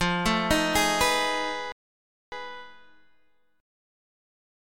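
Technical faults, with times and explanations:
1.72–2.32 s, rebuffering stall: playback starves and halts, leaving a flat 0.6 s gap of silence, then resumes exactly where it stopped with nothing missing, only time inserted.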